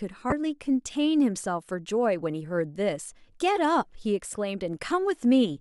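A speech recording with damaged data in a compressed stream at 0.29–0.32 s and 4.31–4.35 s: corrupted bytes make the decoder misread frames and resync, producing a brief glitch at each point.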